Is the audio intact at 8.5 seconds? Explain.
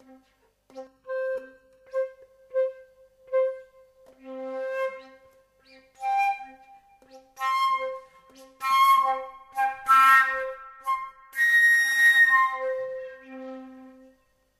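Yes, at 8.5 seconds the sound plays through intact, with no dropout, click, distortion or other fault at that moment.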